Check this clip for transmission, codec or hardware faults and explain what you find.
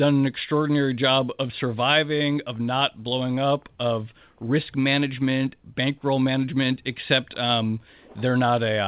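No faults can be heard in the speech, which arrives over a call path with nothing above 4 kHz, a band limit that fits a 64 kbps G.711 mu-law stream.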